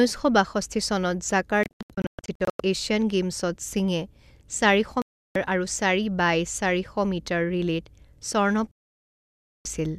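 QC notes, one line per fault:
1.63–2.60 s, digital broadcast dropout: the sound breaks into several short holes, the longest 120 ms, totalling 576 ms over about a second. The receiver muted on failed frames, and that audio is gone.
5.02–5.36 s, digital broadcast dropout: a 336 ms hole of silence as the receiver muted bad frames.
8.71–9.66 s, digital broadcast dropout: about 0.94 s of audio lost to muting before good frames return.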